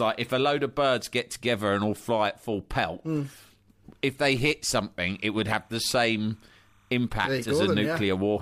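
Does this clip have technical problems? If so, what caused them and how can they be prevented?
Yes. From 5.03 to 7.03 s, just after "if they hit", timecode bleed appears behind the speech: a faint chirping warble roughly 40 dB below it. Linear timecode from a neighbouring track or cable is leaking in. Its square wave flips between pitches near 1 and 2 kHz, repeating in a pattern that fits 30-frame code. That constant two-pitch flutter is what separates it from a single steady whine or hum. Keeping timecode lines shielded and routed away from audio cables and tracks prevents it.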